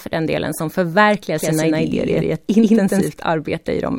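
From 1.38 s, right after "den delen som förverkligar", the speech gains a hard-edged second copy trailing around 150 ms behind, about as loud as the first, so every syllable lands twice with a slapback stutter. The copy is dry and full-band, and it cuts in and out abruptly, ending at 3.08 s. This is a doubled audio track, likely from the same signal being picked up again by a slower path and mixed back in.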